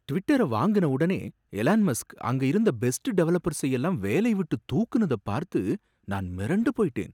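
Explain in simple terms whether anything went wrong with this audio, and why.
Nothing went wrong here: the recorded speech comes through as one steady, unbroken signal with no technical problem anywhere to point to.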